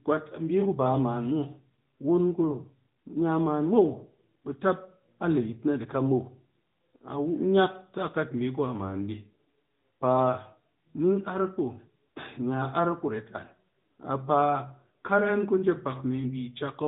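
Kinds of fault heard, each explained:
AMR narrowband mobile codec: The speech sounds muffled and phone-like, with a buzzy, synthetic edge that is plainly audible throughout. Nothing above about 3.8 kHz survives, because the codec samples at 8 kHz. It rebuilds the voice from a vocal-tract model at a rate that fits roughly 10 kbps.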